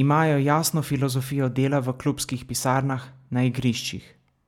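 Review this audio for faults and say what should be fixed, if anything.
No faults found; nothing needs fixing.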